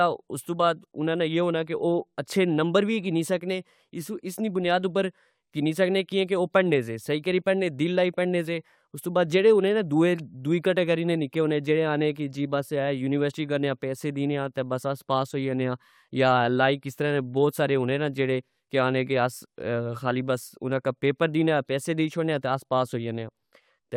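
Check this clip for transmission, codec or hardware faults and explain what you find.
Nothing in this speech recording points to a fault anywhere along its path. There is no event to report at any point in the audio.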